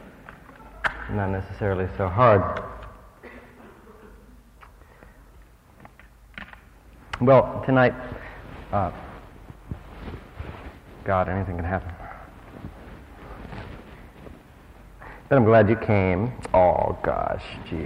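No technical faults can be heard anywhere in the audio, and the signal holds steady from its first moment to its last.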